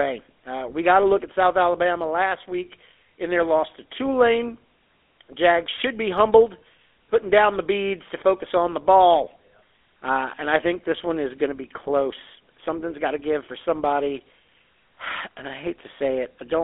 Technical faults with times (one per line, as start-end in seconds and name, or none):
0.00-16.63 GSM full-rate codec